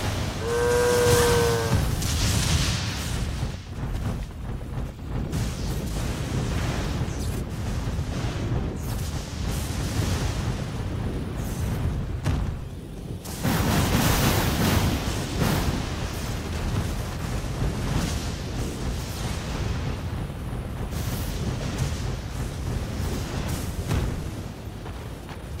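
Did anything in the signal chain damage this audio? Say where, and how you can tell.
No, nothing in the chain has left an audible mark on this audio at any stage, from capture through to playback.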